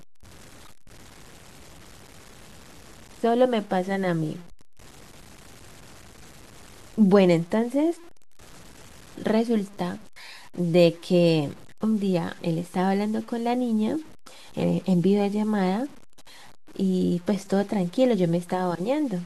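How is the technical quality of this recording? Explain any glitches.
The technical quality is poor: a coarse, grainy distortion runs through the whole recording. The grit follows the speech, so quiet syllables and word tails turn rough and can sputter or drop to near silence, with the error sitting roughly 25 dB below the speech. The likely cause is low bit depth without dither: the audio was probably truncated to about 7 bits, so rounding error tracks the signal. A waveform would show visible stair-steps, and a spectrogram would show hash that comes and goes with the speech.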